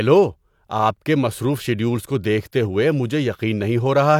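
No technical faults can be heard anywhere in this recording. There is nothing at any point in the audio that calls for comment.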